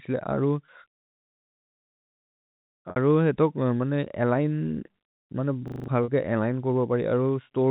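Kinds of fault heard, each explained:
Packet loss with pitch repetition, at 0.66 to 0.68 s, 2.90 to 2.96 s and 6.04 to 6.08 s: audio went missing in gaps of 20, 60 and 40 ms, which fits one, three and two lost 20 ms packets. The receiver covered each hole by replaying the last pitch cycle. The shorter gaps sound like a briefly held, buzzy tone. The 60 ms gap outlasts the roughly 50 ms fade, so it sinks toward silence before the sound cross-fades back.
System hang loop, at 5.68 to 5.88 s: the host stalled while the audio hardware kept reading the same 40 ms stretch of its ring buffer. That single slice plays five times in a row, giving a hard mechanical stutter that repeats 25 times a second. About a fifth of a second of the real signal is replaced by the repeats, and the sound then resumes at a later point, with the narrow telephone band of the G.711 path still audible throughout.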